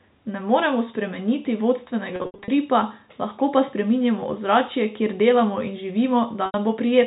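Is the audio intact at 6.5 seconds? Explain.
No. Between 6.46 and 6.54 s, about 80 ms of the stream never arrived, which fits four 20 ms packets going missing. This is packet loss with pitch repetition: the receiver bridged the gap by replaying the last pitch period it had and fading that copy out over about 50 ms. The sound briefly holds as a buzzy, frozen tone, thins into silence, and the speech then returns through a short cross-fade.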